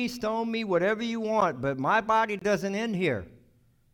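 At 1.41 s, right after "stone me whatever you", the speech drops out in a block of digital silence, about 12 ms, which fits a 512-sample buffer going unfilled. Another follows at 2.39 to 2.42 s, after "but my body", about 23 ms, pointing to 1024 samples. The hard edges give a tick and then a short hole.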